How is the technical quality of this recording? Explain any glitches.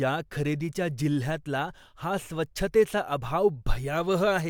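No glitches stand out here; the speech comes across steady and untroubled, with nothing in it that catches the ear as a technical hiccup.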